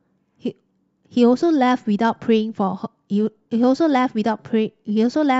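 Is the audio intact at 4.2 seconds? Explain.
Yes, at 4.2 seconds the speech plays through cleanly, with no dropout, click, distortion or other fault.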